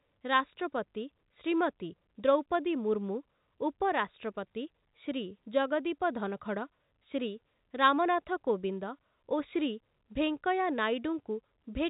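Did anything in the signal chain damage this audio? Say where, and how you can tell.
No: the speech comes through a G.711 A-law telephone path at 64 kbps, which accounts for the band stopping near 3.8 kHz, and no stage in the chain adds audible damage beyond what that format itself imposes.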